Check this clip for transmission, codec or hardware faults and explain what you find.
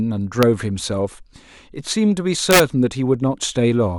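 Integer overflow breaks the speech twice: a single crack at 0.43 s, and a burst from 2.51 to 2.60 s where peaks run about 4 dB past full scale. Instead of being limited, those samples wrap to the opposite extreme, producing violent snapping cracks rather than the flattened, buzzy fuzz of ordinary clipping.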